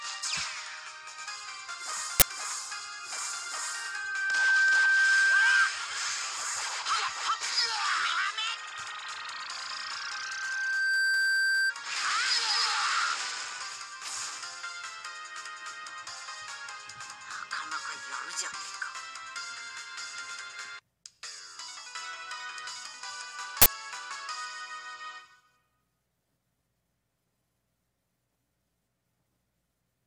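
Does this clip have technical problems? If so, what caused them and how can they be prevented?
Yes. An uninitialised buffer causes short bursts of loud digital noise at 2.20–2.22 s and 23.62–23.66 s. Each burst is a block of leftover memory played as audio. The lengths, about 21 ms and 43 ms, fit 1024- and 2048-sample buffers. On a spectrogram each shows as a bright vertical broadband stripe, and on the waveform as an abrupt slab of jagged values. Zero-filling every buffer before handing it to playback prevents this.

Loudspeaker feedback squeal appears at 3.47–5.80 s and 9.58–11.73 s as a 1.6 kHz tone. The microphone picks up its own loudspeaker, and the loop gain exceeds one at that frequency. The tone swells over roughly one second the first time and about one and a half seconds the second time, peaking roughly 15 dB and 10 dB above the sound. A spectrogram shows a horizontal line at 1.6 kHz that brightens as it grows, while the waveform envelope widens steadily. 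Lowering the gain, repositioning the microphone away from the speaker, or notching 1.6 kHz prevents this.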